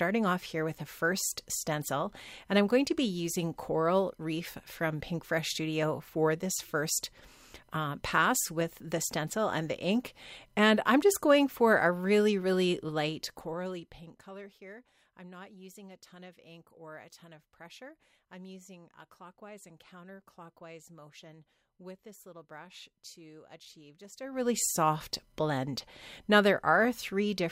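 From 24.14 to 24.5 s, zipper noise: a level change of about 20 dB applied in 1 dB steps, around a hundred a second, ticks audibly, showing as a staircase envelope and vertical spectrogram lines.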